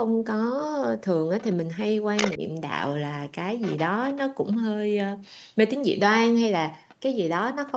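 At 1.4 to 1.54 s a faint second voice sits well under the main talker. That is the other side's voice leaking through, most likely because the loudspeaker signal got back into the microphone and the echo canceller left a residue. It returns at 2.17 to 2.37 s, this time roughly as loud as the talker, and then as quiet scraps at 3.61 to 3.84, 4.05 to 4.18, 4.53 to 4.57, 6.89 to 6.95 and 7.67 to 7.72 s. Leakage adds a voice rather than taking anything away from the talker.

Right after the loudest burst, at 2.37 to 2.41 s, the talker's own level sags by a few decibels for about 40 ms. This is speech suppressed in double talk, likely from the canceller ducking everything when it could not tell the near talker from the echo. Here the main voice briefly dips, and no extra sound is added. Throughout the clip the audio stops near 8 kHz, from the Opus call path.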